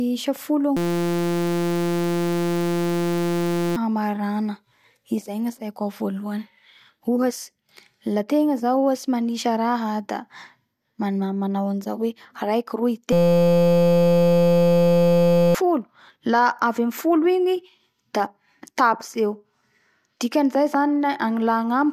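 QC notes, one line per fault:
0.77–3.76 s and 13.13–15.55 s, system hang loop: the playback froze and a 5.8 ms slice kept repeating, which fits a 256-sample buffer. That gives a flat buzz at 172 Hz, and about three seconds and then two seconds of audio are lost.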